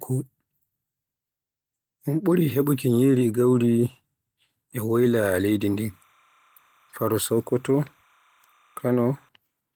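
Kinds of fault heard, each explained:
Timecode bleed: From 5.80 to 9.29 s a faint chirping warble sits behind the speech, roughly 40 dB under it. That's linear timecode at 30 frames per second leaking in from a nearby line, a square wave flipping between roughly 1 and 2 kHz.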